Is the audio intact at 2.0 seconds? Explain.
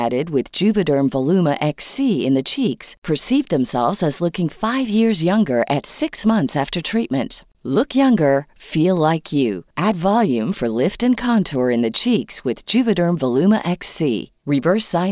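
Yes, at 2.0 seconds the speech is intact, with no audible fault at that moment.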